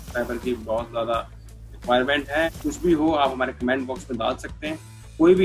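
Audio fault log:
Nothing to log here; there's nothing wrong to be heard anywhere in this one.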